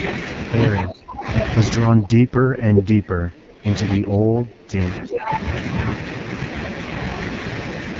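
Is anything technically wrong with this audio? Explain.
Yes. The speech has three problems: heavy codec damage throughout, repeated dips in level, and two brief echoes.

The whole clip carries AMR wideband (HD Voice) codec damage. The speech sounds rough and raspy, and nothing is present above about 7.4 kHz, which points to AMR-WB's lowest 6.6 kbit/s mode. The codec rebuilds speech from a pulse-excited vocal-tract model up to 6.4 kHz and fills the top band with shaped noise. At this rate the model is too coarse, so the harshness is constant, not tied to any moment.

Speech suppressed in double talk is likely behind four dips, at 0.82 to 1.26 s, 1.88 to 3.68 s, 3.97 to 4.81 s and 5.0 to 5.31 s. The level falls by roughly 25 dB in the first two, about 20 dB in the third and about 10 dB in the last. The speech thins and partly drops out. An echo canceller turns the near talker down while it cannot separate that voice from loudspeaker echo. 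Unlike the codec roughness, these dips come and go.

Echo leak is the likely cause of two short delayed copies of the speech, at 2.76 to 2.82 s and 5.12 to 5.18 s. Each arrives 342 ms after the original. The first is about as loud as the direct speech, and the second sits about 10 dB below it. Some loudspeaker sound got past an echo canceller and was sent back. That repeat of earlier sound sets these apart from the suppression dips, which only remove level.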